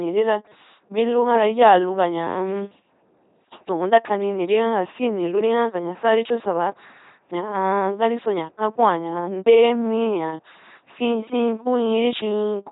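Across the whole clip, the speech has been squeezed through an LPC-10 vocoder, whose heavy damage points to roughly a 2.4 kbit/s stream. Instead of carrying the waveform, the codec rebuilds each moment from a short all-pole filter excited by either a buzzing pulse train or noise, never a mix. The result is a buzzing, mechanical robot voice with wrong-sounding buzz or hiss where voicing is misjudged, and nothing remains above 3.8 kHz.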